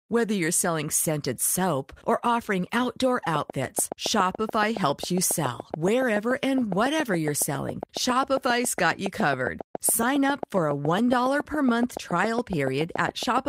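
Likely interference from nearby equipment injects a train of clicks from 3.36 s to the end: regular ticks, about seven per second, popping well above the speech.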